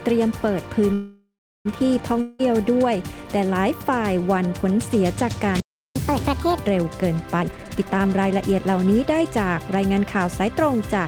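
The audio is interrupted in several different ways. From 0.93 to 1.67 s there is a call audio freeze: the last sound is stretched into a fading buzz, which settles into about 0.37 s of near-silence before the audio resumes. This was likely caused by delayed packets draining the jitter buffer. Nothing is missing afterwards, so the pause adds about 0.72 s of delay rather than cutting anything out. The long network dropout at 2.21 to 2.41 s begins the same way, with a short buzzing continuation of about 0.18 s that never falls to silence. The difference is what follows: the audio comes back further on, and roughly 0.18 s of it is gone for good. A real gap in the content, not just an added delay, is what separates a dropout from a freeze. At 5.60 s a playback stall cuts the sound off mid-flow for about 0.35 s. The player likely ran out of data or was blocked, and unlike the two network faults there is no buzzing fill, only an abrupt stop and clean silence. 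From 5.96 to 6.66 s comes the catch-up at higher speed. The player works through its backlog at 1.5 times normal speed by resampling, so the pitch also rises by roughly seven semitones. Everything sounds hurried and raised in pitch, and then it drops back to normal. The jitter buffer speed-up from 7.40 to 9.90 s also makes the audio faster, at about 128 percent. Here, though, the receiver repeatedly cuts out tiny pitch-period slices to shrink an overfull buffer, removing around 0.7 s in total. The pitch therefore stays where it was, and the rushed feel comes only from the faster pace, which is how it differs from the resampled catch-up.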